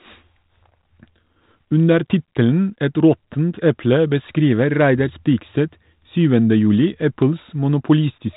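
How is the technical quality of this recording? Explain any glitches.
The recording has no glitches: the speech comes over a 32 kbit/s G.726 telephone path that is working as intended, with the narrow telephone bandwidth and light coding texture that such a link normally leaves.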